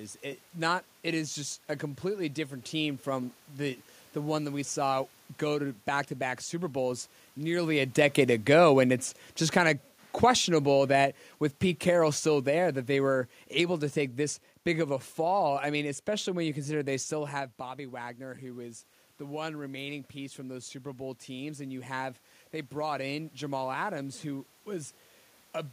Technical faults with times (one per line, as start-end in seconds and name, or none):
7.44-13.83 automatic gain falling
17.59-23.41 automatic gain rising